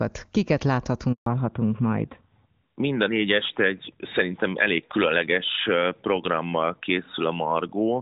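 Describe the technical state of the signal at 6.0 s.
At 6.0 s the signal is in a fallback to narrowband, which begins at 1.26 s and lasts to the end of the clip. The call has dropped from the wideband HD Voice path to an older narrowband codec, likely AMR-NB, so nothing above 4 kHz survives. The speech sounds duller and rougher than the opening second. On a spectrogram, energy that reached toward 7 kHz before 1.26 s stops abruptly at a flat ceiling near 4 kHz.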